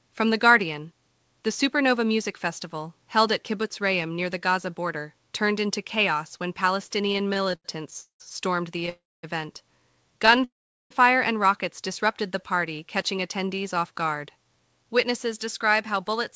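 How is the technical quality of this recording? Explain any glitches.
The recording has clear network glitches from about 7 s onward. It has come through a call link with nothing above 8 kHz, which fits a wideband codec such as G.722.

Repeated stalls (stutter) occur at 7.06–8.22 s, 8.78–8.89 s and 10.26–10.44 s. Packets arrived late, so the buffer kept emptying and the last sound was stretched. In the first span, about a third is filler and the longest hitch is 0.19 s, so it drags and stutters.

Call audio freezes follow at 8.89–9.25 s and 10.44–10.92 s. Each is likely from the jitter buffer running dry. A brief held tail fades into silence, adding a 0.34 s gap and a 0.46 s gap.

A jitter buffer slow-down runs from 12.27 to 14.45 s. The receiver repeated tiny pitch periods to rebuild its reserve. The audio plays at about 93% speed, adding 0.16 s, with drawn-out sounds at unchanged pitch.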